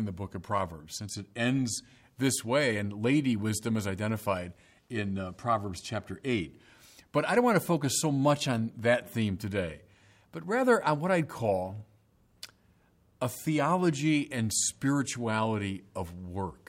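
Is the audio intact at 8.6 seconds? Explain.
No. At 8.58 s, between "to focus so much" and "that theme today but", there are likely dropped samples: a fraction of a millisecond skipped, so the waveform jumps and gives one sharp click.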